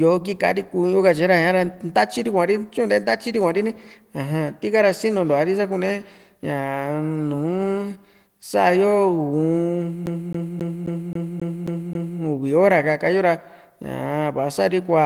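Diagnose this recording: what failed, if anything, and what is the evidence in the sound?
The failure is at playback from the disc: a CD stuck on one turn. From 10.06 to 12.20 s the same 0.27 s slice of speech repeats eight times, each pass broken by a short mute where the laser jumps back one track. Packet-loss concealment or a buffer underrun would give decaying, smeared or irregular repeats. Here the loops are identical and evenly spaced, the fast mechanical stutter of a scratch catching the pickup at the same point on every rotation.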